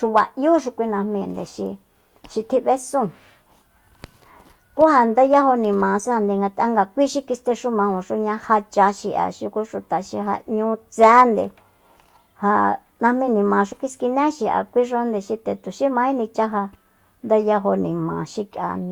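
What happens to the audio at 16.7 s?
Nothing goes wrong at 16.7 s: the speech runs on intact through that moment, with no dropout, click, distortion or other fault.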